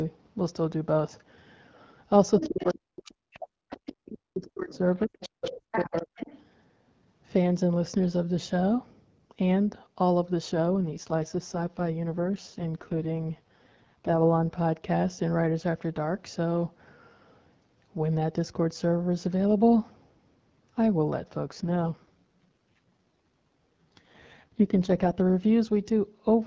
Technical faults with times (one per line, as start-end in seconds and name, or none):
2.38-3.70 speech suppressed in double talk
2.39-2.74 other side's voice leaking through
3.05-3.11 other side's voice leaking through
3.70-4.18 other side's voice leaking through
4.28-5.19 speech suppressed in double talk
4.74-6.41 other side's voice leaking through
5.83-6.16 speech suppressed in double talk
10.56-14.56 AMR rate drop
21.39-25.12 AMR rate drop